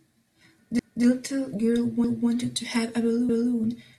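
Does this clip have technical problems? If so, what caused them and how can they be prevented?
Yes. Overlapping chunks: at 0.79–1.04 s, 2.04–2.29 s and 3.29–3.54 s, a 250 ms stretch of speech repeats, giving a regular stutter. Each 1.0 s chunk starts 250 ms before the previous one ends. Advancing each chunk by its full length prevents this.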